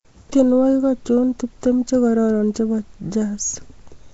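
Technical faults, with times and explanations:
Throughout, Nellymoser compression: the speech carries a rough, hissy halo and a smeared, underwater quality, and nothing is heard above about 7.7 kHz. The likely cause is the Nellymoser Asao codec, at a rate that fits roughly 32 kbps. It codes short blocks with very few bits per sample, so quieter frequency bands receive no bits and are refilled with noise. That noise fill produces the hiss, and the coarse block coding blurs the sound's detail.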